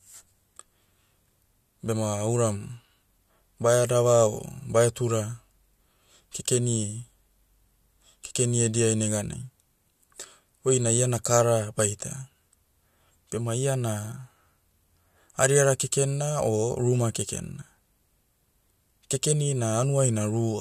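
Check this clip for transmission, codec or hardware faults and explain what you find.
Nothing here sounds like a fault, so the speech can simply be heard as it is.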